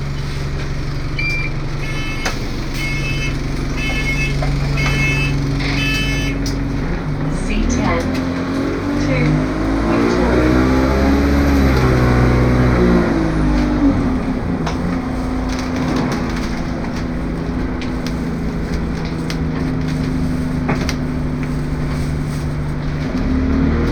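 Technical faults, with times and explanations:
6.22 s and 16.24 s, overlapping chunks: each 10-second block starts 20 ms early, so that sliver replays and ticks at every join.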